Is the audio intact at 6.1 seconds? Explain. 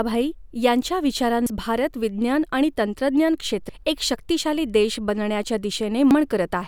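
No. At 6.11 s the speech is broken by a brief chirp, squawk, click or short hole that doesn't belong to the recording. This is damaged data in a compressed stream: some bytes in the encoded file were lost, zeroed or overwritten at that point, so the decoder misreads the affected frame, loses its place in the bitstream and has to hunt for the next valid frame header before normal playback resumes.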